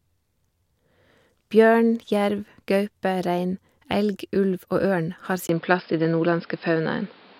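Input switched to a poorer device at 5.47 s: after a 20 ms gap, the speech turns duller with nothing above 5.2 kHz, roughly 5 dB different in level, and carries new background noise. A likely change of microphone.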